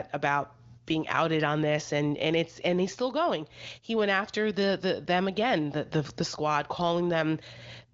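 No faults found; the speech is band-limited to about 7.3 kHz, consistent with an AMR wideband (HD Voice) codec path at a high mode such as 23.05 kbit/s.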